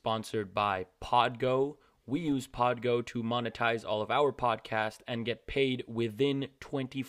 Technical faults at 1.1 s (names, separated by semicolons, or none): filter restarted on every block